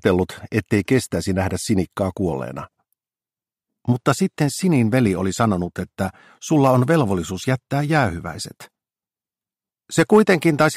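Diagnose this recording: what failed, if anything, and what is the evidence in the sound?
Hard clipping at a gain stage or converter: peaks overshoot the ceiling by about 2 dB at 5.41–5.44 s and 6.64–7.01 s, and about 3 dB at 9.99–10.66 s. The flattened tops add a harsh, bright crackle only on loud moments, unlike codec smearing or gentle saturation.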